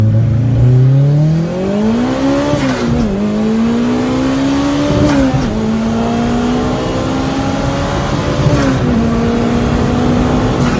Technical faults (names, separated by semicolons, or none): none